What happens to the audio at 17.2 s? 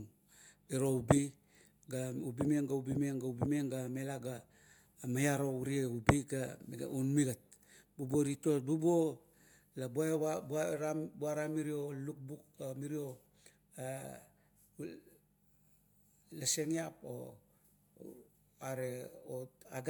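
At 17.2 s the speech carries on cleanly, with no dropout, click, distortion or other fault at that point.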